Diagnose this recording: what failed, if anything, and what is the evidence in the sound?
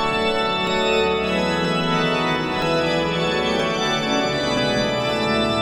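Audio missing between chunks at 0.67, 1.65, 2.62, 3.60 and 4.57 s: short skips recurring about once per second, each dropping a few tens of milliseconds and butting the two sides together without silence. The likely cause is the driver or buffer stage losing samples at each chunk handover.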